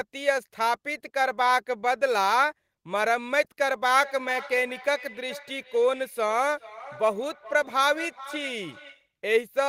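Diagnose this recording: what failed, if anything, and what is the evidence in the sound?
What failed here is call processing: a feedback echo between two devices. From about 4.0 s to 9.14 s the speech comes back at a steady interval of roughly 400 ms, peaking at about 17 dB below the direct speech. That fixed delay points to a second device in the same room on the same call, playing this feed out of its speaker into the open mic. The local echo canceller only knows what its own device plays, so it never touches that loop.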